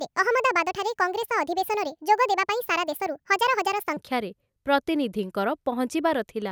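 Audio recorded at one rate plays back 1.5 times too fast from 0 to 3.97 s, a wrong sample rate that fits 32 kHz material read at 48 kHz, so speech sounds hurried and about seven semitones higher.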